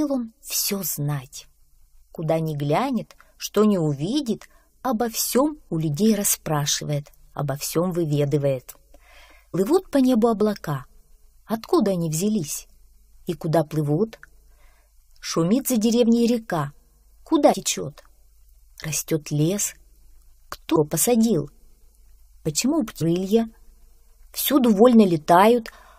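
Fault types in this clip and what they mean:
Damaged data in a compressed stream: corrupted frames make the decoder misread and lose sync, producing four brief blips at 9.53, 17.52, 20.75 and 23.0 s.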